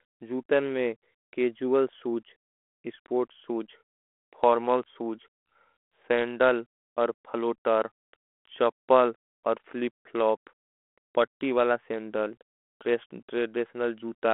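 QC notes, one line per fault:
Nothing to flag here, so there's nothing to log for this speech clip.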